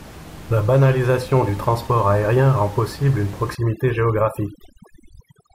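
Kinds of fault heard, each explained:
Overdone noise removal: from 3.55 s to the end, the background drops and breaks up into twinkling, warbling specks, and the speech loses its softer parts as they fade away. A noise reduction stage set too strong is cutting individual frequency bands down or out whenever they sit near its noise estimate, so quiet speech detail goes along with the room noise, which earlier sits about 19 dB below the speech.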